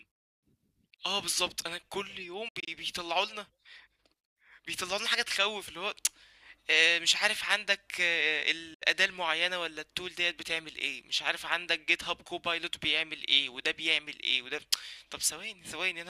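At 2.48 s the speech breaks into several short silences spread over about 186 ms, the longest about 70 ms. At 8.74 s a single 70 ms hole follows. Both are likely Bluetooth dropouts: late packets were discarded, and the speech resumes further along.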